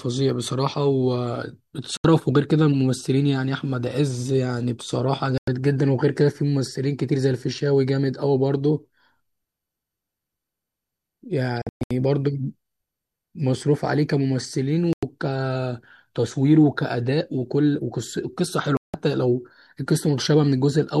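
Digital broadcast dropouts cut the speech five times: at 1.97 s for 72 ms, at 5.38 s for 96 ms, at 11.62 s where 240 ms of holes are scattered across 0.29 s (longest run 120 ms), at 14.93 s for 96 ms, and at 18.77 s for 168 ms. Each time the receiver muted on losing or rejecting frames, so that audio is gone. A waveform shows flat gaps; a spectrogram shows blank vertical columns at every frequency.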